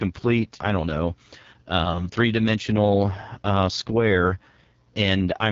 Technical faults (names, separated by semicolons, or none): AMR wideband (HD Voice) codec